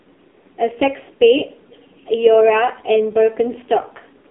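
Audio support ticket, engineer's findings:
AMR narrowband mobile codec, whole clip: band limited to about 250 Hz to 3.7 kHz, nothing above 3.8 kHz. Heavy buzzy, synthetic colouring, consistent with low-rate AMR-NB around 5.9 kbps.

Echo leak, 2.75 to 2.83 s: faint delayed copy arriving 443 ms late, roughly 30 dB under the speech. Likely residual echo from a far-end echo canceller.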